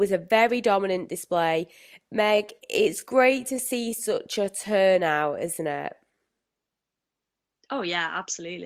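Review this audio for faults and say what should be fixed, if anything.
From 2.18 to 6.22 s the speech slows to about 0.74 times its pace at unchanged pitch, likely a time-stretched section, with elongated spectrogram harmonics and repeated waveform segments. To prevent it, edit the script or timing to fit the slot rather than stretching recorded audio.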